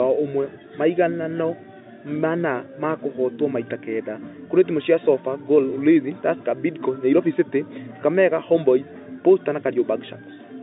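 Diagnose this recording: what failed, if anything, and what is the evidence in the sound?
Nothing failed: the sound carries only the narrow telephone band of G.711 coding, with nothing above about 3.8 kHz, and gives no evidence of a fault.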